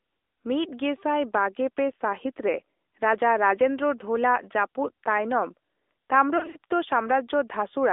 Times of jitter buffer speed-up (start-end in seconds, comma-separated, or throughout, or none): none